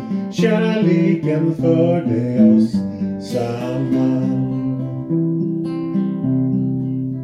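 At about 5.42 s there's a case of compressed frames skipped. The decoder drops what sounds like a couple of frames, so the audio lurches forward by roughly 50 ms.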